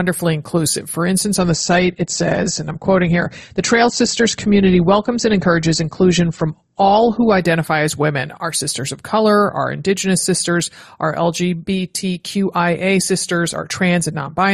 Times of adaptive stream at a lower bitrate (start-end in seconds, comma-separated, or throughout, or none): 1.39-7.39